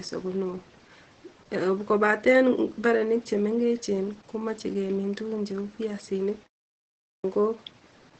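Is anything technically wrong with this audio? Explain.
Yes. Throughout the clip the speech sounds muffled, hoarse and faintly robotic, with nothing above about 8.7 kHz. This is Opus voice compression, and the damage is plainly audible. The band limit and the coarse, buzzy texture point to the SILK linear-prediction coder at a low rate, which fits roughly 12 kbps in wideband mode.

At 6.96 s, after a 0.56 s pause, the speech resumes abruptly, with its opening cut away: about 0.28 s is missing, until 7.24 s. This is a clipped start after a pause. The output device went idle during the silence and took time to wake before sound got through.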